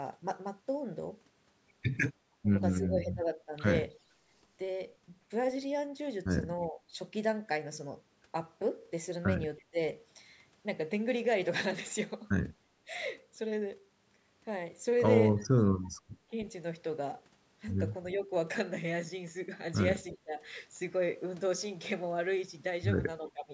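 Speech here, run through a call's microphone chain (nothing above 8 kHz, lowest bass trimmed). The most frequent fault is speech suppressed in double talk. The voice gets ducked in patches: between 2.42 and 3.55 s it drops by roughly 15 dB for around 0.7 s in total, and between 6.68 and 9.79 s there are another few hundred milliseconds at a similar depth. There's a brief dip of roughly 10 dB at 12.85 s, and from 16.18 s to the end it's ducked by up to roughly 20 dB, adding up to about a second. The likely cause is the far end talking at the same time, so the echo canceller couldn't tell the near talker from the loudspeaker echo and pulled everything down. Separately, from 3.99 to 4.28 s the background is gated by the echo canceller. The room tone drops about 15 dB for roughly 0.3 s while the loudspeaker path is active, then comes back once the canceller lets go. There's also echo leak, a copy of the voice returning 322 ms late. 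At 9.58 to 9.64 s it's a barely-there scrap, very faint. From 15.38 to 16.45 s it's a longer stretch, still well under the speech. That's likely loudspeaker pickup one side's canceller didn't fully remove and sent back down the line.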